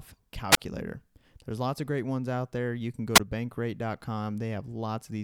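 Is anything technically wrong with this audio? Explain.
Yes. There are two wireless microphone squelch dropouts in this speech, at 0.51–0.57 s and 3.14–3.20 s. In each, the analogue FM radio link weakens, the receiver's noise rises, and the squelch shuts the output off. The result is a burst of hiss, then a silent hole of about 24 ms in the first and 15 ms in the second, before the speech returns. On a waveform each hole is a flat line. On a spectrogram it is a blank vertical stripe right after a brief broadband haze.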